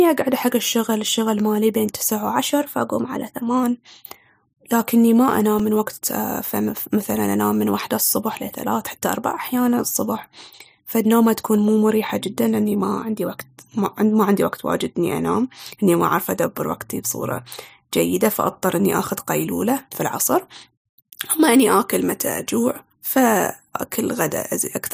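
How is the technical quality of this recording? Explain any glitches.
The recording has two kinds of glitches: two brief speed-and-pitch jumps and one tiny dropout.

Drift correction step, from 2.36 to 3.63 s and again from 12.83 to 13.53 s: the speech suddenly runs about 5.6% fast and rises by roughly 94 cents, close to a semitone, then snaps back. The likely cause is clock-matching software jumping its playback rate to rebalance its buffer.

Block of digital silence at 5.59 s: for about 2.3 ms the signal drops to silence with no fade in or out, probably because the output buffer wasn't filled in time. It is too short to hear as a gap, so it comes across as a sharp tick.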